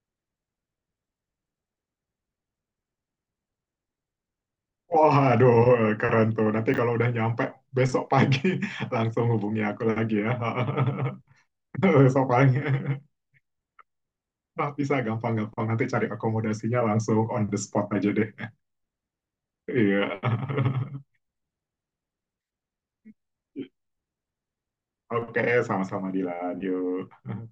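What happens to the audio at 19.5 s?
At 19.5 s the speech continues intact, with no dropout, glitch or distortion at that point.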